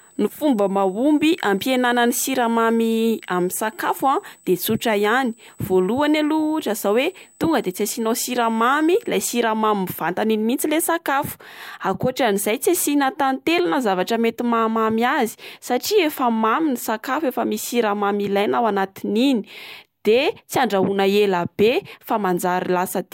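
From the start of the recording to 9.09 s, a USB whine sits under the speech: a steady, fixed-pitch tone at 8 kHz, with its strongest component at the 16 kHz harmonic, roughly 25 dB below the speech. The 8 kHz rate matches the bus's 125-microsecond microframe cycle, whose current draw has leaked into the audio through the power or ground path. It is heard as a thin, high, constant whine.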